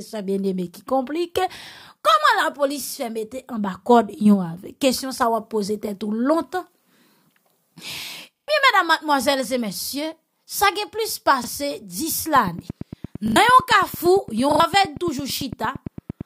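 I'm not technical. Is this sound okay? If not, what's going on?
No. Repeated buffer at 8.36–8.48 s, 11.44 s, 13.28–13.36 s and 14.52–14.60 s: fresh audio arrived late, so the player replayed the last short piece, up to three extra times at 8.36 s. Each hiccup sounds like a quick stutter, and the piece lengths point to 40 ms chunks.

A train of clicks runs from 12.36 s to 16.22 s, about nine evenly spaced ticks per second, roughly forty in all, sitting on top of the sound. This is likely interference from nearby equipment or a faulty connection or power supply.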